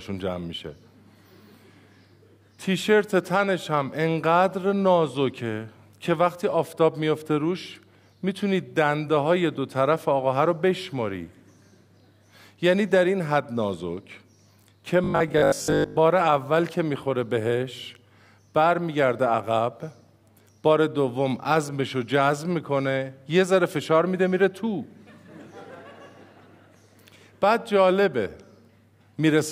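From 15.04 to 16.00 s, the playback side likely ran short of fresh audio and kept refilling the gap by looping its most recent fragment, a 20 ms slice, while the incoming material was dropped. This is robotic sound from repeated short buffers. Because that slice recurs 50 times a second, it stamps a fixed 50 Hz buzz onto the sound, and with most of this stretch made of repeats, the passage turns rigid and metallic.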